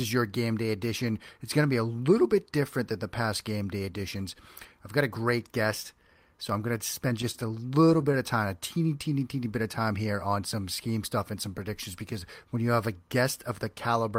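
From 7.09 to 8.16 s, between "I'm going to" and "of time a teeny", the speech drags and catches in seven brief stalls, each held over by stretching the last sound, the longest about 30 ms. These are repeated stalls (stutter): late packets left the jitter buffer empty.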